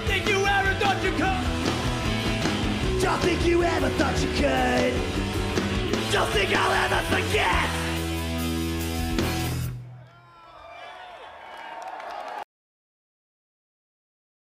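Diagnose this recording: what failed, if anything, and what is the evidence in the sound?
What failed here is an audio dropout to silence at 12.43 s that runs straight to the end of the file. The sound cuts off abruptly mid-flow, and what follows is plain silence with no room tone or hiss at all, so nothing is reaching the converter. The likely culprit is upstream of capture, in the analogue wiring or the input link: a device or cable dropped out, and the recorder simply kept writing silence.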